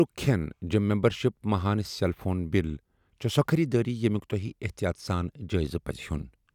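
No technical faults turn up anywhere in this speech recording.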